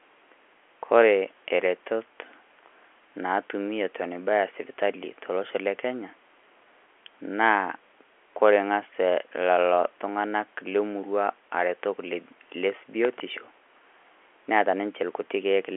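No faults found; the speech sits in a telephone band of roughly 300 Hz to 3.4 kHz with nothing above 3.8 kHz, consistent with a 64 kbps G.711 A-law line.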